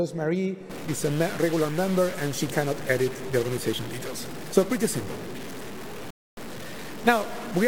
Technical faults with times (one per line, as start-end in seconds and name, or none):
0.70-7.67 stuck bit
6.10-6.37 Bluetooth stall